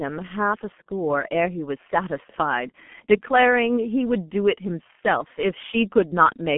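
Right from the start the speech has heavy G.723.1 codec damage: everything is squeezed into a 150 Hz to 3.4 kHz line, nothing above 3.6 kHz, leaving it muffled, hoarse and smeared, which fits the 6.3 kbit/s mode.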